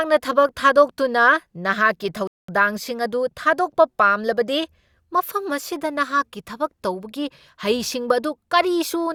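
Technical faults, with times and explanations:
2.27–2.49 s, rebuffering stall: the speech drops to silence for about 210 ms, then picks up again just before "ꯑꯗꯨ ꯊꯥꯗꯣꯛꯄ ꯄꯥꯝꯂꯕꯗꯤ" at exactly the point where it halted. The playback buffer emptied before the next chunk of audio had downloaded, so the player paused output and waited instead of skipping ahead. No audio is lost. The gap is inserted time, which is why the speech continues seamlessly after the silence, with no jump or missing syllable.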